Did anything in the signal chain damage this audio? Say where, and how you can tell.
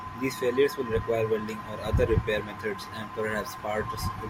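No, nothing in the signal chain audibly damaged this speech recording, and the signal shows no sign of a fault at any stage.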